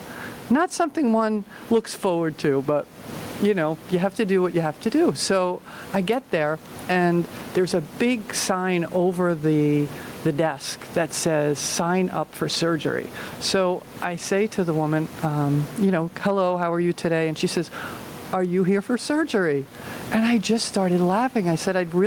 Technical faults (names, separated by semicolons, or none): gain pumping